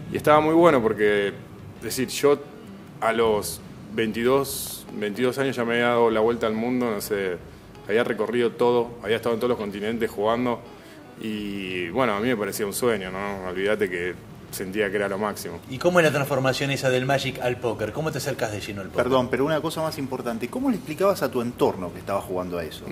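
A train of clicks runs from 4.67 to 5.99 s over the audio, about ten irregularly spaced pulses at 7.6 per second, peaking near signal level, likely from nearby interference.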